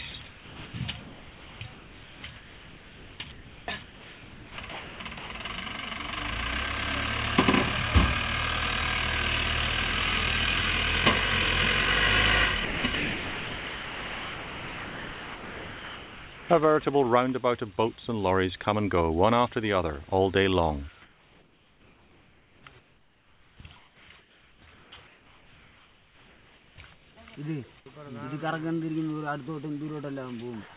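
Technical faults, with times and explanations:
0.11–0.74 s, 1.01–5.45 s and 12.65–16.49 s, sound chopped by the voice detector: the sender's voice detector likely kept switching transmission on and off, so quiet edges drop into synthetic noise, sounding choppy.
21.02–27.17 s, comfort noise in place of the background: transmission likely stopped during the pause, and roughly 5.3 s of real background became steady, featureless synthetic noise generated at the receiver.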